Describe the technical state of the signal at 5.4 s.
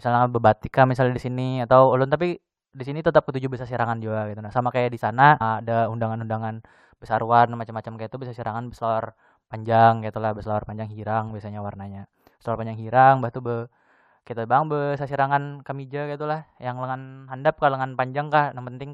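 A stream segment skipped at 5.40 s: the speech jumps abruptly ahead with a small blip, likely because one segment failed to load and playback continued from the next.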